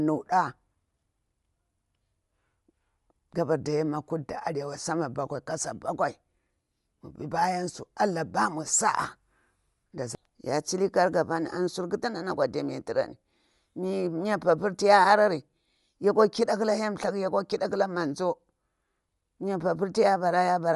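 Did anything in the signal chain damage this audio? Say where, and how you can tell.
Yes. Bluetooth LC3 compression runs throughout the speech at the codec stage: nothing survives above 11.5 kHz, and the upper band has a grainy, breathy, noise-filled edge. This likely comes from LC3's 10 ms transform frames, with damage that points to a moderate bitrate around 48 kbps.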